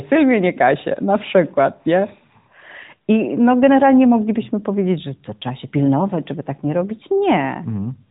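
No technical faults can be heard in the speech, which passes through an AMR-NB mobile codec at 12.2 kbps that leaves only light coding traces and carries nothing above about 3.8 kHz.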